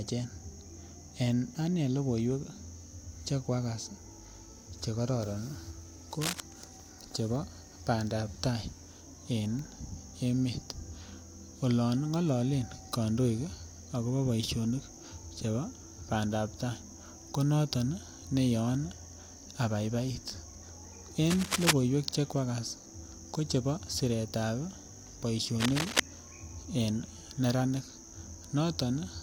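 At 6.21 to 6.40 s, 21.30 to 21.71 s and 25.60 to 26.00 s, brief bursts of scratchy, rustling cable scratch noise sit over the speech at roughly the same loudness as the voice. The likely cause is a worn cable or connector being moved, its contact resistance jumping erratically. On a spectrogram each burst shows as a dense, broadband smear; the waveform shows ragged, irregular spikes riding on the signal.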